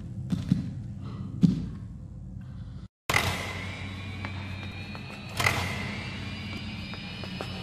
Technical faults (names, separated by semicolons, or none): repeated buffer